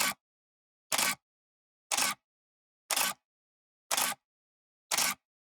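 No technical faults can be heard in this recording of sounds. There is nothing here to describe.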